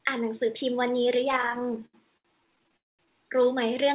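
Throughout the clip, one channel arrives a few samples late, a tiny fraction of a millisecond, before the two are mixed to mono, causing channel delay (comb filtering). The first cancellation notch falls near 7 kHz, above the call path's 4 kHz ceiling, so within the band it acts as a gentle loss of top end that leaves the speech slightly dull and hollow.

From 1.32 s to 2.75 s, packets keep arriving late, and the jitter buffer runs dry about twenty times. Each time, the receiver stretches the last sound to cover the wait. These repeated stalls (stutter) fill 325 ms, roughly a quarter of that stretch, with the longest pause 78 ms. No speech is lost, but it drags and stutters.

From 2.77 s to 3.01 s comes a call audio freeze, likely from packets held up in transit, which empties the buffer for 221 ms. Nearly all of that wait is silence. The speech then resumes where it stopped, so a pause has been inserted and nothing is missing.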